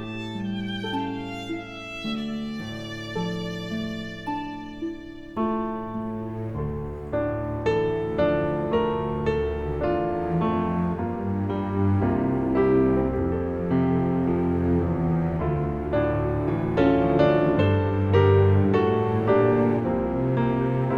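No technical faults can be heard anywhere in the audio.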